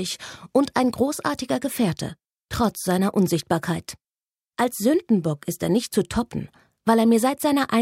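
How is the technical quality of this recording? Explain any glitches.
The technical quality of this recording is sound, with no glitches to explain.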